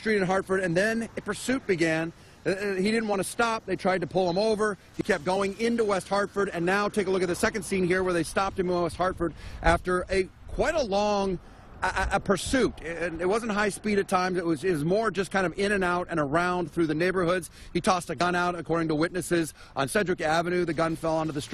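At 1.17 to 1.20 s, and again at 18.17 to 18.21 s, compressed frames are skipped: whole frames never reach the output, so the audio jumps ahead, by roughly 50 ms the first time and roughly 20 ms the second. A waveform shows an abrupt shift in envelope, and a spectrogram shows a brief vertical band where the time structure breaks.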